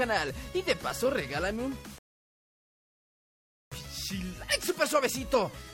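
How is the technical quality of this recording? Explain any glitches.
At 1.98 s the sound drops abruptly into silence and stays silent until 3.72 s, then picks up exactly where it left off, with nothing skipped or repeated. That is a rebuffering stall. The player exhausted the audio it had downloaded and had to pause until more data arrived. No material is lost, but the gap inserts about 1.73 s of dead time, stretching the recording's running time by that amount.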